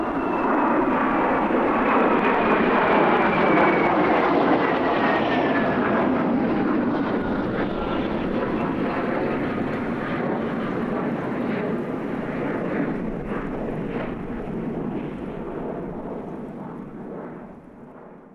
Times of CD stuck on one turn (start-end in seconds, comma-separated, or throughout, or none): none